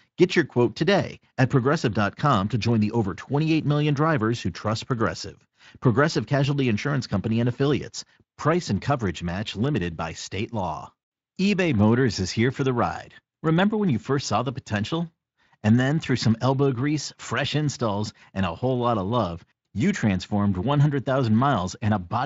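No technical faults are audible.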